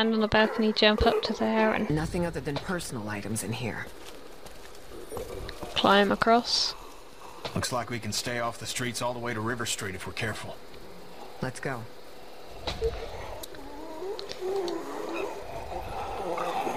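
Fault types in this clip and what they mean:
No fault types are present in this clip.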